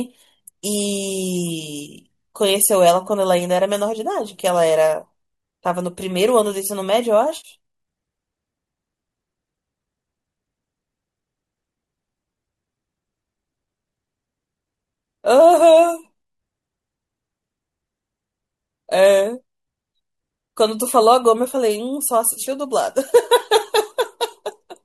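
AAC frame loss with concealment occurs at 7.37 to 7.48 s and again at 22.33 to 22.40 s. The decoder lost stretches of about 70 ms and 40 ms, which fits runs of roughly seven and four short frames from what is likely low-delay AAC compression. It filled each gap by reusing the last good spectrum with randomised phase, so the speech briefly turns smeared, noisy and phasey rather than dropping to silence.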